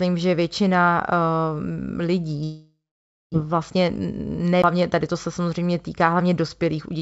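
From 2.44 to 3.36 s the sound breaks off. The last sound is drawn out as a fading buzz or hiss, then about 0.55 s of near-silence follows before the audio resumes. Roughly 0.6 s of material never comes back, so the audio picks up further along than where it stopped. This pattern is likely a long network dropout: packets stopped arriving, the receiver concealed the gap by extending what it had, and the delay grew by around 0.3 s.

From 3.44 to 5.15 s the audio runs quick, at about 111 percent of normal speed, while the pitch stays where it was. This is a jitter buffer speed-up. After the outage, delayed audio arrived in a burst and left the buffer too full. The receiver trimmed short pitch-period-length pieces again and again, about 0.3 s in total, to bring the delay back down. The result sounds hurried.

At 4.62 s, inside that faster stretch, there is a mute of about 15 ms, and the audio then carries on from a different point. 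This is a CD skip: the laser jumped to another turn of the disc's spiral, so the playback position moves abruptly forward or back.

Throughout, the call path band-limits the audio, with nothing above 8 kHz. That fits a G.722 codec at 64 kbps.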